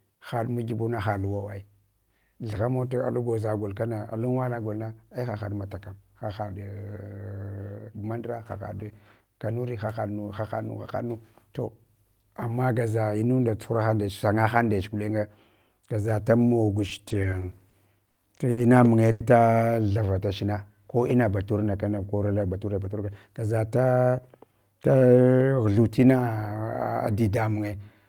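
Just after "gaza ta", from 16.89 to 17.75 s, there are repeated stalls (stutter). Packets kept arriving late, so the jitter buffer emptied nine times and the receiver stretched the last sound each time, for 120 ms in all. No gap is longer than 40 ms and nothing is lost, so the audio judders rather than dropping out.

Three separate short stalls from a late packet follow, at 18.11, 18.51 and 19.11 s. Each time one packet missed its slot and a sound is held for 40, 60 and then 90 ms before continuing from the same point. These are isolated holds, not a run of many small ones, and each leaves the delay longer.

After "munye ta", from 19.93 to 20.27 s, a jitter buffer slow-down repeats pitch periods to rebuild a reserve, adding 41 ms. The audio plays at 91% speed with unchanged pitch, with drawn-out sounds.

After "batur na kana konil", from 22.32 to 23.43 s, a jitter buffer speed-up trims short pitch-period pieces to shed excess delay, removing about 150 ms. 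The audio runs at 111% speed at the same pitch and sounds hurried, the reverse of the slow-down.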